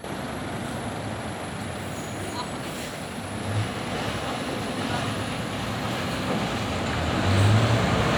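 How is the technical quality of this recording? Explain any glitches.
No audible technical faults.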